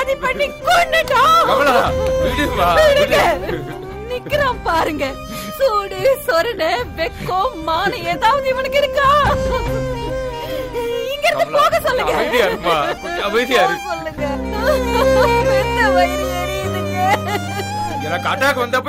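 From 8.33 to 9.05 s, rectified GSM signalling bursts gallop as a dit-dit-dit of short 217 Hz buzzes about 20 dB down; spectrograms show clustered vertical stripes.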